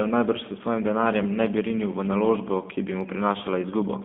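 From start to finish the speech has passed through a G.729 codec, a low-rate VoIP coder whose character fits the 8 kbit/s G.729A variant. Rather than storing the waveform, it rebuilds each 10 ms frame from a vocal tract filter, a pitch predictor and a handful of pulses, inside a telephone band of roughly 200 Hz to 3.5 kHz. The speech stays intelligible but plainly rough and synthetic, with no low bass and no high-frequency detail.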